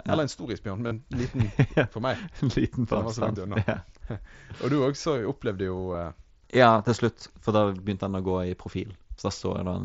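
A brief buzzy, held tone replaces the speech from 0.87 to 0.92 s, with a slight warble as normal audio resumes; a nearly hidden glitch follows at 2.19 s, and a shorter buzzy patch at 5.93 s. This is concealed Bluetooth headset packet loss. Audio packets from the mSBC headset link, which carries the speech up to 8 kHz, went missing for about 38 ms, 8 ms and 15 ms. Each gap was filled by repeating the closest-matching stretch of the preceding waveform.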